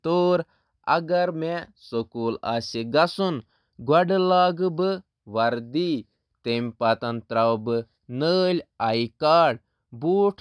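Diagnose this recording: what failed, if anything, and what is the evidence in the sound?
No fault found in this recording.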